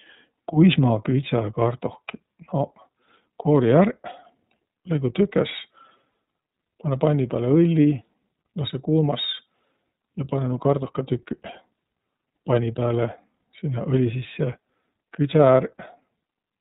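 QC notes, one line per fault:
Throughout, iLBC codec: the speech is band-limited with nothing above 4 kHz, and it sounds plainly rough and a little synthetic. The codec encodes each frame's excitation on its own at a low rate, which fits iLBC's 13.33 kbps mode with 30 ms frames.
6.11–6.14 s, lost iLBC frames: for a 30 ms moment the speech turns into a held, faintly buzzy vowel, then sounds normal again right away. The gap fits one missing 30 ms frame. The decoder filled it by repeating the last pitch cycle mixed with noise, and because iLBC frames don't depend on the one before, recovery is immediate.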